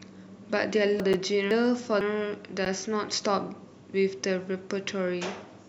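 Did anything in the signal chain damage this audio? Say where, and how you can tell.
Yes. At the buffering stage, chunks out of order: between 1.0 and 2.01 s a 500 ms chunk was written one chunk late, so the speech jumbles at the hard joins.

In the driver or buffer, blocks of digital silence: output went unfilled at 1.13 s for 8 ms and at 2.65 s for about 11 ms, the second a 512-sample block. Each gives an abrupt tick.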